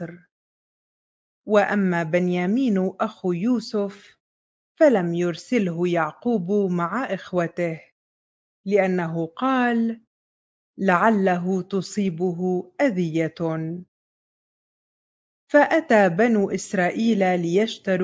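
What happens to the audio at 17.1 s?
Nothing goes wrong at 17.1 s; the audio plays through that moment intact, with no dropout, click or distortion.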